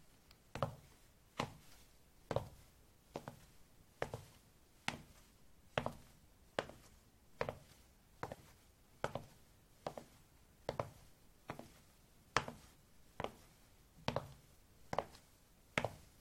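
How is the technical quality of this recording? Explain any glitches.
No technical glitches can be heard anywhere in this recording of sounds. The audio continues steadily from beginning to end with no interruptions or disturbances introduced by the recording or playback chain.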